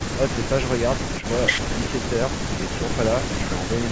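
Nothing goes wrong anywhere in this bit of speech; it has simply been through a call's microphone processing, which trims off the very lowest bass and leaves nothing above 8 kHz, and that's just how that kind of path sounds.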